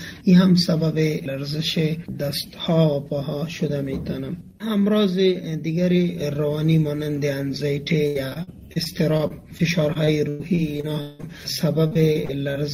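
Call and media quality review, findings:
Repeated packet loss (robotic sound), 8.07–11.25 s: lost or late packets, with concealment extending the last sound into each hole. Choppy, robotic result; roughly a fifth of the span is patched, and the longest hole is 179 ms.

Repeated packet loss (robotic sound), 11.87–12.56 s: same jitter-buffer concealment recurring. Short holes, none longer than 39 ms, covering about a fifth of the span and patched by continuation, leaving choppy sound with pieces missing.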